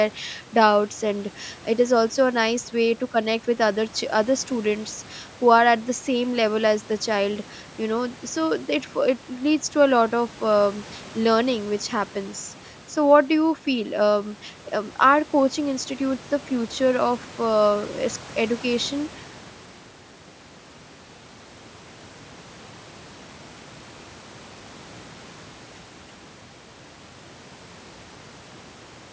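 There are no technical faults in this speech to describe in time order.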